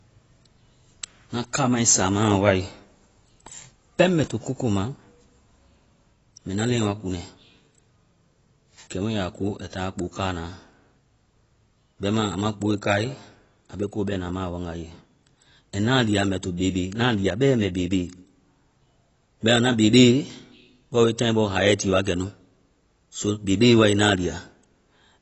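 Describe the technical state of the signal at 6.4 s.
At 6.4 s, as across the whole clip, likely AAC compression at a low bitrate strips everything above 8 kHz, leaving the speech dull, smeared and warbly.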